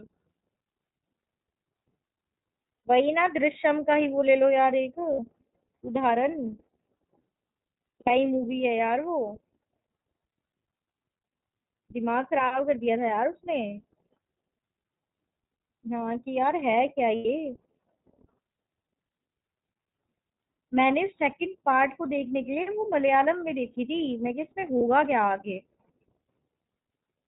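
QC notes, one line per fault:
throughout, iLBC codec: narrowband coding in 30 ms frames, consistent with the 13.33 kbps mode, removes everything above 4 kHz and leaves the speech plainly rough and synthetic.
2.84, 5.13–5.19, 8.01–8.10, 17.16–17.26 and 24.77–24.82, lost iLBC frames: the decoder filled gaps of 90, 60, 60, 90 and 30 ms by repeating the last pitch cycle with noise. Each gap sounds like a brief buzzy held vowel, and the voice recovers immediately afterwards.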